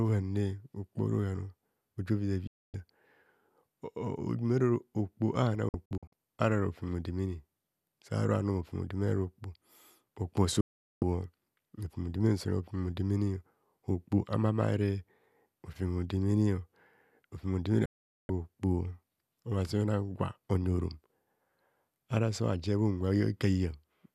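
Digital broadcast dropouts cut the speech at 2.47–2.74 s after "ora ohan oji oviza", at 5.69–6.13 s as scattered short holes before "ara rofem odemene", at 10.61–11.02 s, and at 17.86–18.30 s. Each time the receiver lost frames and muted with a fade of about 3 ms, leaving blank vertical bands on a spectrogram and flat-line gaps in the waveform.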